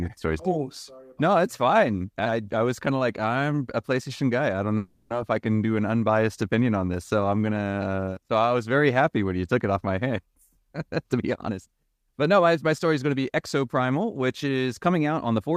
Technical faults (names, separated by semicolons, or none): call audio freeze; jitter buffer speed-up